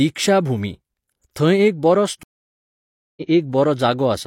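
A speech clip with a stream reconnect: right after "एक बरो" the audio cuts out at 2.23 s and stays silent for about 0.93 s, returning at 3.23 s. The connection dropped, and the player reconnected and started a fresh decoder mid-stream. Because the stream kept running during the outage, speech resumes roughly 0.7 s further along. On a waveform this shows as a flat gap; on a spectrogram, an empty band with energy fading back in where the audio returns.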